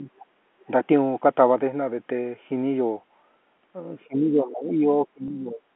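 Speech suppressed in double talk, 0.0 to 0.1 s: the voice dips by roughly 10 dB for about a tenth of a second. Both ends were likely talking at once, so the echo canceller could not tell the near talker from loudspeaker echo and turned everything down.

Background gated by the echo canceller, 0.41 to 0.52 s: the room sound drops by about 9 dB for around 70 ms, then returns. While the loudspeaker was active, the canceller clamped the microphone hard and briefly removed the ambience along with any echo.

Other side's voice leaking through, 0.6 to 0.65 s: a very faint scrap of a second voice, far below the talker, slips past. This is likely residual loudspeaker pickup that the echo canceller did not fully subtract from the microphone signal.

Speech suppressed in double talk returns at 4.07 to 4.86 s and at 5.05 to 5.67 s. It is deeper here, around 20 and 25 dB. The talker's voice sinks for much of both spans as the canceller likely mistakes overlapping speech for echo.

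Packet loss with pitch repetition, 5.28 to 5.30 s, inside that second suppressed span: 20 ms of audio is missing, which points to a single lost packet on this G.711 A-law line. The receiver bridged the gap by repeating the last pitch period, giving a brief held, buzzy quality.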